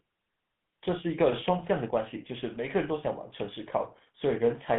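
Speech running through a GSM full-rate codec for the whole clip, with plainly audible buzzy, gravelly roughness from the pulse-driven vocal-tract model, which fits the 13 kbps codec. The band is squeezed to roughly 150 Hz to 3.5 kHz, so it sounds thin and phone-like.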